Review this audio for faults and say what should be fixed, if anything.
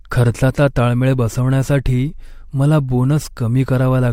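There's a small skip from 3.05 to 3.09 s: an overlap between stream segments, where the player trimmed about 35 ms of real speech and the waveform jumps. Fix it by aligning segment timestamps at the packager so consecutive segments don't overlap.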